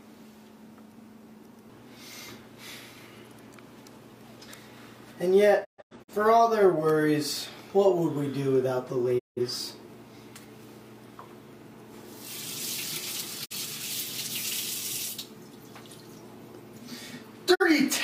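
Digital broadcast dropouts mute the sound four times: 5.63 to 6.13 s, 9.18 to 9.40 s, 13.44 to 13.55 s and 17.54 to 17.64 s. The receiver lost frames and muted until clean ones returned, so the content sent during each gap is gone. Each hole fades over 20 ms. The first is broken into several short holes across 0.43 s. The shortest gaps are 43 ms, which fits the length of one frame. On a waveform and spectrogram these appear as flat, empty blocks with soft edges.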